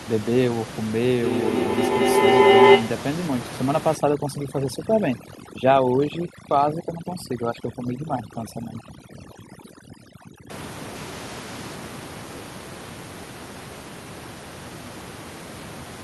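From 1.22 s to 3.09 s a feedback howl builds over the speech. Sound leaving a loudspeaker is being picked up again by a microphone on the same call, and each pass around that loop comes back louder instead of decaying. The energy narrows to a tone around 400 Hz that pulses roughly every fifth of a second, matching the loop's round-trip delay, and peaks about 11 dB above the speech before the loop is broken.

From 3.96 s to 10.50 s the audio shows overdone noise removal. The suppressor is set too aggressively, so any frequency band that falls near its noise estimate is pulled far down or switched off entirely. The room noise, which otherwise sits about 10 dB below the speech, collapses to near silence scattered with twinkling specks. Quieter components of the speech are stripped away along with it.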